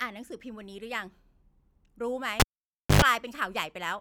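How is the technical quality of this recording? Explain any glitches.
The speech is marred by one clear glitch. From 2.40 to 3.02 s a live cable gets pulled and plugged in: a pop, about 0.57 s of near silence, then roughly 0.1 s of 50 Hz mains buzz as only the plug tip touches, and a second pop when the sound returns.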